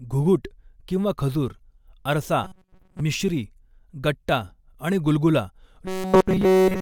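From 2.44 to 3.01 s and 5.86 to 6.82 s, robotic sound from repeated short buffers: a rigid 188 Hz buzz, likely from roughly 5 ms buffers replayed in place of most, then all, of the audio.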